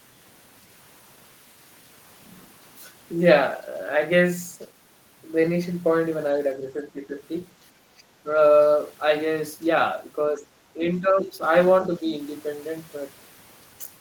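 Speech, with the talker dipping or cutting out in pieces at 6.59–7.16, 7.87–8.04, 8.23–8.29, 10.35–10.53, 10.74–10.80, 11.00–11.43 and 11.87–12.13 s. The drops range from slight to deep. This is likely speech suppressed in double talk, where the echo canceller attenuated the near talker along with the echo.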